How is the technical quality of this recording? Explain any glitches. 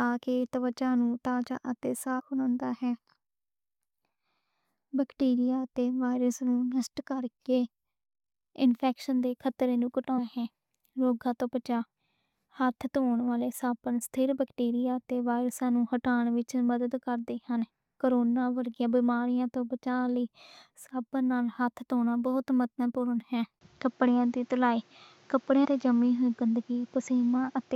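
The recording has two kinds of fault: several dropouts where compressed audio frames were skipped, and a late drop in quality when the input changed to a poorer device.

Compressed frames skipped at 2.18–2.21 s, 10.17 s and 25.64 s: missing or rejected 23.2 ms frames make the speech jump ahead, about 150 ms, 150 ms, then 50 ms.

Input switched to a poorer device at 23.59 s, likely a headset or second microphone: after a 20 ms gap, nothing sounds above 7.6 kHz and new noise sits about 35 dB down, at unchanged loudness.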